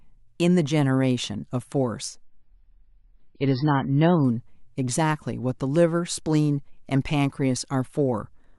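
Adaptive stream at a lower bitrate, from 2.24 to 4.24 s: the speech abruptly loses its treble, with nothing above about 5.5 kHz, and turns smeared and watery, which fits a player switching from roughly 128 kbit/s MP3 down to about 16 kbit/s, then back, with no gap.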